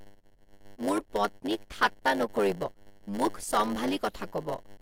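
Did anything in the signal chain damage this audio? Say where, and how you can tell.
Yes. At the buffer stage, a block size mismatch (padded) runs throughout: each block written is shorter than the block read, and the remainder is zero-filled. That stamps a short gap into every block, giving a 100 Hz buzz, and the speech plays at 0.919 speed with its timbre unchanged.

At the codec stage, damaged data in a compressed stream hits from 2.62 to 2.69 s, right after "মোৰ পত্নীক ঠাট্টা নকৰিব". Corrupted frames are misread and the decoder loses sync hunting for the next header, producing a brief glitch.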